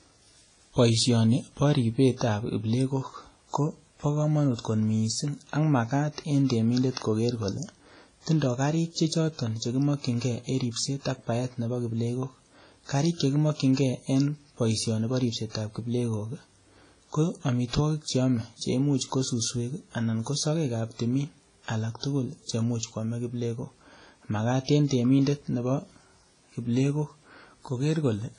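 From start to finish the speech carries heavy transform-codec damage, most likely WMA compression, and the sound fits an early WMA encoder running at a low bitrate around 24 kbps. Nothing survives above 10.4 kHz, so the top end sounds dull and clipped off. Long transform blocks smear quantisation noise across tens of milliseconds, leaving a ringing, washy quality around syllables, with hiss that swells and fades along with the speech.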